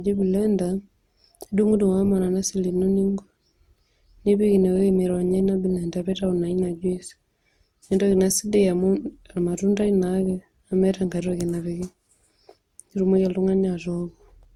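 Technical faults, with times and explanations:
Throughout, low-bitrate audio saved at a high bitrate: the speech likely passed through a low-rate codec, fitting 32 kbit/s Opus, before MP3 at about 192 kbit/s. The second encoding keeps those earlier coding artefacts intact, though content still reaches 20.1 kHz.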